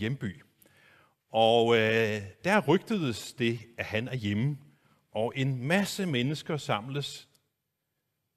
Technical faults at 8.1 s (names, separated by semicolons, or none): none